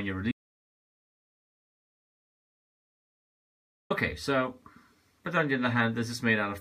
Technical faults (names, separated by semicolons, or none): audio dropout to silence